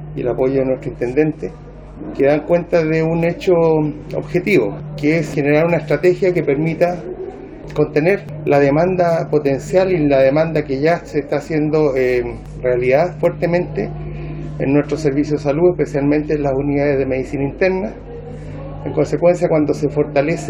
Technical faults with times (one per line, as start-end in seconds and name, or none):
0.00-14.35 sample clock jitter